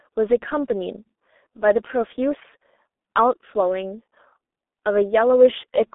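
From start to finish the speech passes through a G.723.1 codec, an early internet-telephony coder working in 30 ms frames at a very low rate, likely near 6 kbit/s. The line carries roughly 250 Hz to 3.6 kHz, so there is no bass and nothing above that ceiling. Its slow-updating voice model causes heavy damage: the speech sounds muffled and hoarse, with consonants blurred and smeared across frames.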